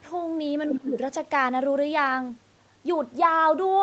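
From 0.67 to 0.77 s a faint second voice slips in under the speech, sitting roughly 10 dB below it. This is the other side's voice leaking through, likely loudspeaker playback that the echo canceller failed to fully strip from the microphone signal.

Overlapping that, from 0.7 to 0.97 s, the speech itself sinks by around 15 dB for a stretch of roughly a third of a second. This is speech suppressed in double talk, likely the echo canceller confusing the talker with the incoming echo and attenuating both together.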